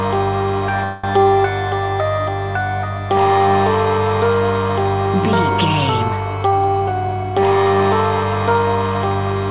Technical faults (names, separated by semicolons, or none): call audio freeze